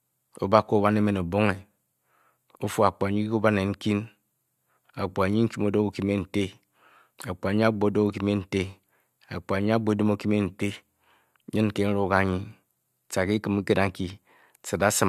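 No technical faults can be heard anywhere in the speech, and the signal stays steady and continuous throughout.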